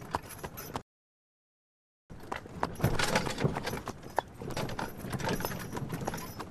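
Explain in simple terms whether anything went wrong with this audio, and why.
Something did go wrong. At 0.82 s the sound suddenly cuts to silence. It stays silent until 2.1 s, then picks up exactly where it stopped. This is a rebuffering stall. The player ran out of audio it had already downloaded. It had to wait for more to arrive before carrying on. Nothing is missing from the sound itself. But the pause adds about 1.3 s of dead air that shouldn't be there.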